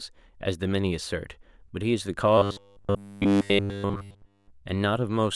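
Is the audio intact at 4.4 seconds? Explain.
No. From 2.38 to 4.52 s there is robotic sound from repeated short buffers, likely from audio arriving too seldom and a 10 ms block being replayed. Nearly all the real sound is skipped, leaving a rigid 100 Hz metallic buzz that appears as evenly spaced horizontal harmonic stripes on a spectrogram and as a repeating 10 ms cycle on the waveform.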